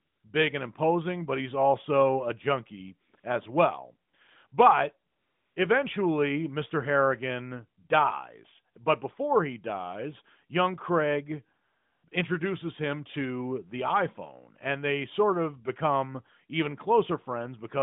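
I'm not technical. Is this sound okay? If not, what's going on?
No. In the pauses, the real background is swapped for a smooth, steady hiss that switches in and out. This is AMR comfort noise: the phone treated the talker as silent, stopped sending speech, and the receiver filled in artificial noise. It happens ten times between 0 and 12.1 s. The longest gaps are 0 to 0.24 s, 5.12 to 5.56 s and 11.64 to 12.04 s, with brief blips near 3.1 to 3.2 s, 4.1 s, 4.5 s, 8.7 s and 12.1 s.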